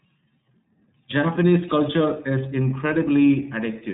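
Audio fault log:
Throughout, iLBC codec: the speech is band-limited, with nothing above 3.8 kHz, so it sounds dull and narrow. Each 30 ms frame is coded on its own. That gives a plainly audible rough, slightly synthetic texture, consistent with a rate near 13.33 kbps.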